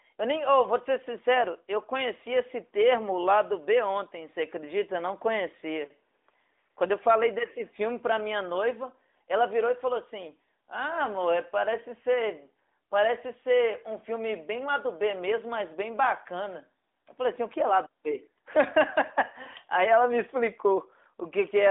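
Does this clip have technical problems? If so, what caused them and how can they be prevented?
No, there are no technical faults: the speech is carried over an AMR narrowband mobile codec, its light coding texture consistent with the 12.2 kbps mode, with the line band spanning roughly 250 Hz to 3.6 kHz and nothing above 3.7 kHz.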